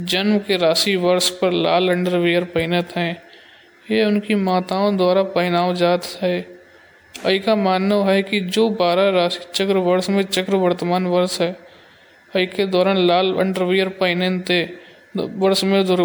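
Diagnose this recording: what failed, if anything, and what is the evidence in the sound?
The failure sits at the codec stage: generation loss across the whole speech clip. The audio has a swirly, smeared, hollow character beyond what a single MP3 pass would give, with softened consonant attacks and nothing above about 20.9 kHz. The likely cause is roughly seven rounds of decoding and re-encoding at a setting consistent with 128 kbit/s MP3. Each pass re-quantises on a shifted frame grid, so noise and spectral gaps accumulate.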